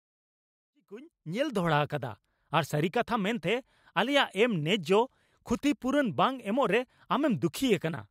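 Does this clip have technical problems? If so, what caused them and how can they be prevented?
No technical faults are present.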